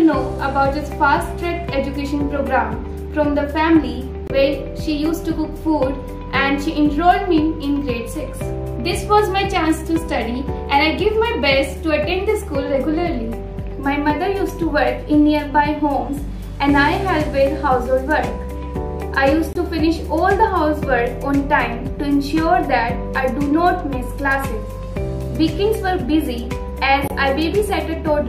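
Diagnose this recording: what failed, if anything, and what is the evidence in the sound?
The fault is at the codec stage: corrupt frames were muted. Abrupt silent holes open at 4.27–4.31 s, 19.53–19.57 s and 27.07–27.12 s. The first two, about 40 ms each, point to a single rejected frame, and the last, 50 ms, fits two. Damaged compressed frames failed decoding and the player inserted silence. Unlike packet-loss concealment, nothing fills the gaps. Unlike a buffer underrun, the surrounding sound keeps its timing.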